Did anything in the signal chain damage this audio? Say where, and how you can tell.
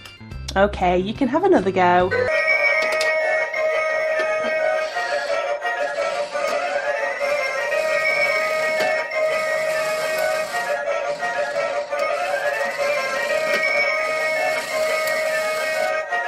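No, nothing stood out on listening that would point to damage at any stage of the chain.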